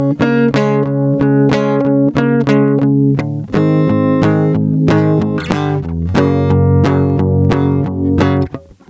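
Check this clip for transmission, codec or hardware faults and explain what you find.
One fault runs through the whole music clip: gain pumping. The level swings by around 20 dB, leaving the music squashed. The likely cause is gain set far too high for the microphone, with a fast limiter clamping down on every peak. The call microphone processing, which leaves nothing above 8 kHz, is working as expected.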